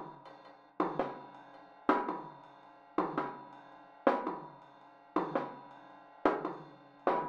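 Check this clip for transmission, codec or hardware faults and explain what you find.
One fault runs through the whole clip: a doubled audio track. Every sound comes back about a second and a half later as an exact, full-band copy, a few decibels quieter, with no reverb tail or room colour. The likely cause is a second, slower capture path mixing the same audio back in out of step.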